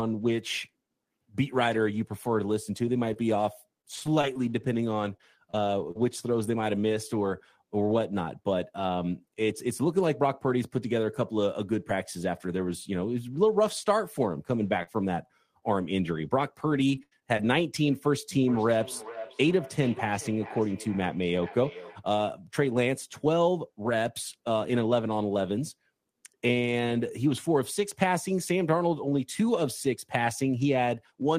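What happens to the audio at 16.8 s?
At 16.8 s the speech falls inside a burst of repeated packet loss (robotic sound) running from 16.63 to 17.41 s. Four holes, totalling 140 ms and the longest 82 ms, were patched by stretching the preceding sound, so about 17% of that span is concealment. The result is choppy speech with pieces missing. On a spectrogram, harmonics freeze into flat, smeared bands at each patch; the waveform shows short repeated, looped-looking segments.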